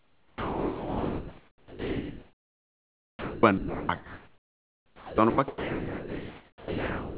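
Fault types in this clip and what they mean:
Sound dropped by the voice detector: speech repeatedly gives way to steady comfort noise, from the start to 3.43 s, 3.58 to 5.18 s, 5.3 to 5.38 s and 5.48 s to the end, likely because the sender's detector took quieter speech for background and stopped sending.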